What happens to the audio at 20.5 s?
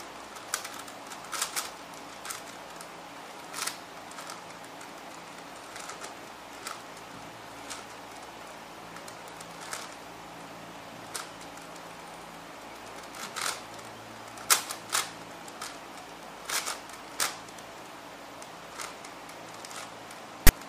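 A brief, harsh rasp bursts in with hard edges from 20.47 to 20.49 s, pushed off-centre rather than sitting evenly. This is file tags played as audio: a block of text metadata is being read as sample values, so its characters emerge as loud, lopsided static.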